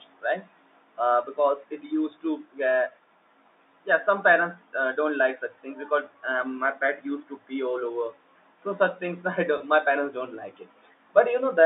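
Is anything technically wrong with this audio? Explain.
Yes. Packet loss with pitch repetition occurs from 9.58 to 9.60 s, a gap of about 20 ms, which fits a single lost packet on this G.711 telephone line. The receiver bridges the gap by replaying the last pitch period, so the sound briefly holds with a slightly buzzy, frozen quality.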